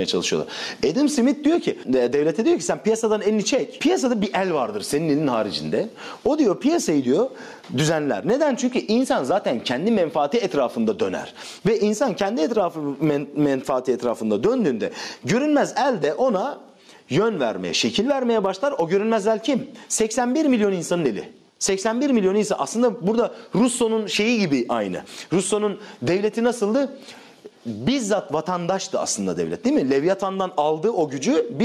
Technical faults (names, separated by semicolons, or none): gain pumping